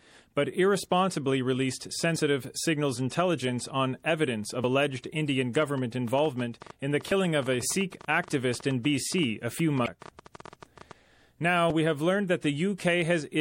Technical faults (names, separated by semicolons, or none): MP3 compression; audio missing between chunks; train of clicks; damaged data in a compressed stream